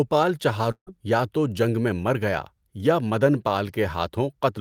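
A long network dropout hits this speech from 0.71 to 0.89 s, likely caused by audio packets failing to arrive. The receiver stretches the last sound into a fading buzz, which gives way to silence, and speech resumes with roughly 160 ms missing.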